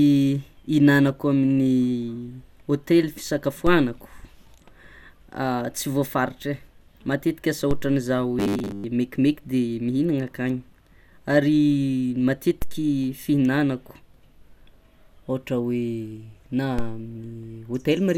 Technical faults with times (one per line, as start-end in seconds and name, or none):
3.67 DC step
7.71 DC step
8.39-8.84 robotic sound from repeated short buffers
12.62 DC step
16.79 DC step